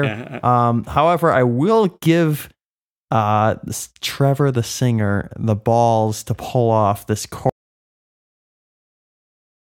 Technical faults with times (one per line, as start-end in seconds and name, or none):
7.49-9.70 audio dropout to silence